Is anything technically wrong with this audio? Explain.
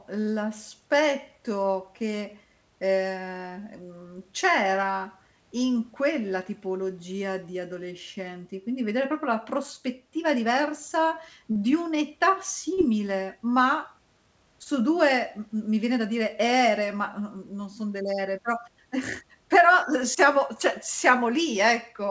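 Yes. Short concealed packet loss occurs at 11.52–11.57 s, just after "proprio la prospettiva diversa", and again at 12.73–12.79 s and 14.63–14.67 s. Each time, about 20 to 40 ms of audio arrived too late, and the receiver filled the gap by extending the preceding sound, which produces a brief smear or wobble. The call path itself has nothing above 8 kHz, which fits a G.722 wideband link.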